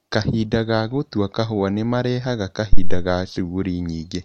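A phantom power thump hits this speech clip from 2.73 to 3.10 s, right after "ka gũtua kahũa nĩmarehaga": a deep, low thud that dies away in about 84 ms and drives the input to about 0 dBFS, so it overloads. Phantom power or another supply was switched on or off while the input was live. That sudden voltage step passed through the coupling capacitors as a single low-frequency surge, producing the thump and then its rapid decay.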